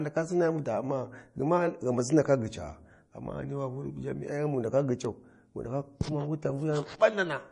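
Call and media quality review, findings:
MP3 compression, whole clip: encoder likely starved of bits, consistent with a bitrate around 40 kbps. Treble cut flat at 10.6 kHz, nothing above. Weak spectral lines dropped and restored frame to frame, so the speech sounds plainly watery and swirly, with s sounds going metallic and consonant attacks smeared.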